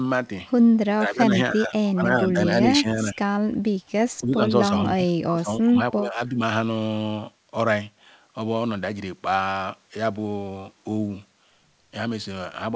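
Speech, with the level dipping in pieces at 0.89 to 2.39 s, 2.63 to 3.21 s and 4.23 to 6.4 s, by up to about 15 dB. This is likely speech suppressed in double talk, with the echo canceller ducking the talker during overlap.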